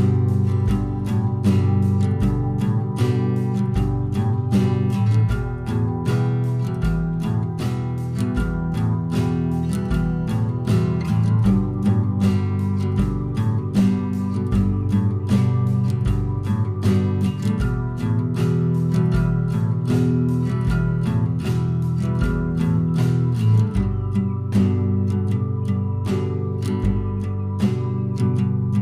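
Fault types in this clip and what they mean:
No technical faults can be heard anywhere in this audio. There is nothing here to list by type.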